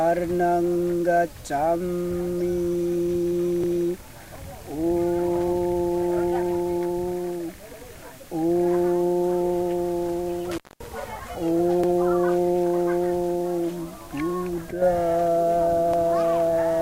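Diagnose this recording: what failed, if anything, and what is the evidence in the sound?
The buffering stage is splicing its blocks with overlapping chunks: each roughly 4.0 s block begins before the previous one finishes, so 100 ms of sound replays at every join. Stutters land at 3.64–3.74 s, 7.74–7.84 s, 11.84–11.94 s and 15.94–16.04 s, evenly spaced.

A loose connection in the analogue wiring causes an intermittent contact between 10.51 and 10.87 s. The line goes open for about 225 ms, dropping the sound out with crackle at both edges as the contact breaks and remakes.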